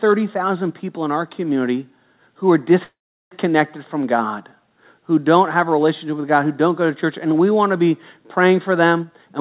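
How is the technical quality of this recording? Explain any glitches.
The recording has two call glitches. The audio is narrowband, with nothing above 4 kHz, which fits a G.711 A-law call codec at 64 kbps.

Call audio freeze, 2.84 to 3.33 s, after "our community who are": the last sound stretches into a fading buzz, then about 0.38 s of silence. The speech then resumes intact, 0.47 s late. The likely cause is delayed packets emptying the jitter buffer.

Jitter buffer speed-up, 8.99 to 9.40 s, after "to be praying for": the speech runs at 129% speed with unchanged pitch and sounds hurried. The receiver trimmed roughly 150 ms of pitch periods to drain excess buffered audio.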